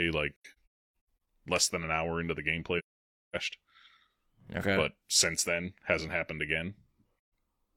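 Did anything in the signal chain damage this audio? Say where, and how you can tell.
Yes. The speech drops into soft-edged silences at 0.36 to 0.93 s, 2.78 to 3.35 s, and briefly at 7.27 to 7.30 s. Each one fades out and back in rather than cutting off sharply. The first is broken into several holes, the longest about 0.3 s. This is AAC frame loss with muting at the codec stage. Missing frames were decoded as an empty spectrum, and the overlapping transform windows taper the sound into and out of every gap.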